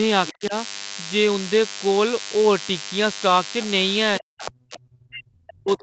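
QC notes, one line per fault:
Throughout, DECT cordless phone buzz: there's a thin, steady buzz at 100 Hz riding under everything, sitting roughly 15 dB below the speech and loaded with harmonics. That 100 Hz rate matches the 10 ms radio bursts a DECT handset or base sends out. Something in the audio chain is rectifying those bursts into the signal. Since the clip tops out around 8 kHz, you only hear the lower harmonics of the buzz.
0.28 to 0.33 s, 4.40 to 4.51 s and 4.73 to 4.79 s, other side's voice leaking through: short scraps of a second voice pop up. The first one sits about 20 dB under the talker, the middle one about 15 dB under, and the last one about 25 dB under. The likely cause is the far end's voice coming out of the talker's loudspeaker and getting back into the mic. The echo canceller didn't fully remove it, so these fragments made it through.
0.32 to 0.54 s and 4.20 s to the end, speech suppressed in double talk: the talker's level drops sharply in both spans. 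The first dip costs roughly 200 ms of audio and goes down about 30 dB at its deepest. The second runs right to the end of the clip and bottoms out near 40 dB down. Both spans overlap the leaked far-end scraps. That fits the likely explanation: both sides were talking at once, and the echo canceller couldn't tell them apart, so it pulled the near voice down along with the echo.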